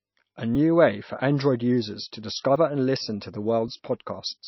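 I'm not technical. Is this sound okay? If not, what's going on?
No, it has a couple of problems. The whole clip sounds like MP3 compression squeezed too hard. The top of the treble is cut off, so the speech sounds dull and muffled, and the remaining sound has a watery, swirly quality. That's likely a low-quality MP3 encode: when the file is made too small, the encoder throws away the treble and the quieter detail, and what's left flickers from moment to moment.

There are also three quick jumps in the sound, at 0.55, 2.56 and 3.68 seconds. These are dropped buffers, which are overruns. The software likely didn't grab its chunk of audio in time, so that chunk got overwritten and the sound on either side was spliced together. You won't hear a gap. The audio just skips ahead by a sliver, about 10, 30 and 20 thousandths of a second.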